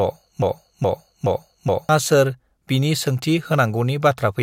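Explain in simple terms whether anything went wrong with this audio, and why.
The speech opens mid broken-record loop. A 0.42-second piece repeats three times until 1.89 s, likely from a stalled player. The missing speech is lost.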